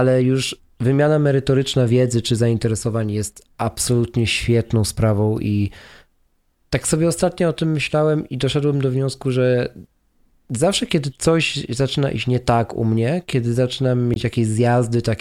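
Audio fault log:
14.13–14.16 s corrupt frame decoded: just after "u mnie kiedy zaczynam", a loud, harsh blip. Flipped bits in about two frames put energy at wrong frequencies.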